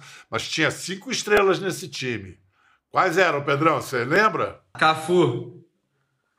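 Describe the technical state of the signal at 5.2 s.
At 5.2 s the speech signal is intact, with no dropout, clipping, glitch or other fault to be heard at that point.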